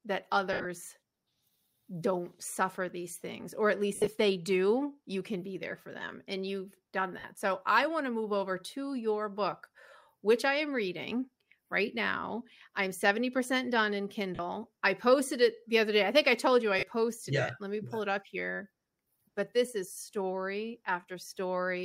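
At 0.53 to 0.66 s and again at 3.95 to 4.07 s, between "these things or at" and "they do you can", lost LE Audio frames scatter gaps over about 120 ms, with the longest run about 70 ms. Shorter drops follow at 7.19 to 7.24 s, 14.35 to 14.39 s, 16.79 to 16.83 s (after "i told you i", before "yeah it let me") and 19.92 to 19.97 s, just after "but this is". Each gap is filled by the LC3 decoder repeating the last spectrum with random signs. This turns the sound into a brief noisy smear that fades within the longer runs. On a spectrogram these show as short blurred bands with the harmonic structure washed out. In the waveform they appear as patches of noise-like, decaying amplitude. The light lossy compression sits underneath without marking these spots.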